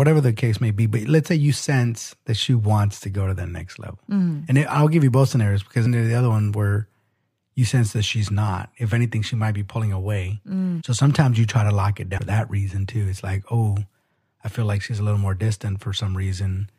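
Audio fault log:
5.85, 10.80–10.82 and 12.17–12.19 s, compressed frames skipped: the decoder drops runs of whole frames, missing or rejected as damaged, so speech lurches forward by about 100, 150 and 200 ms. The jump sizes fit frames of roughly 23 ms.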